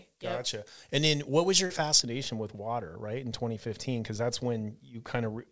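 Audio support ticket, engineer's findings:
Pre-emphasis left on, 0.00–2.00 s, ending before "with water right": thin, sibilant, over-bright. FM 75 µs boost, matching de-emphasis missing; treble up about 14 dB. Spectrogram: upper band brighter until 2.0 s.

Short concealed packet loss, 1.66–1.72 s: brief smear. Jitter buffer/decoder filled a 40 ms gap by extending prior signal, then crossfading back. Spectrogram: smeared patch, G.722 band capped at 8 kHz.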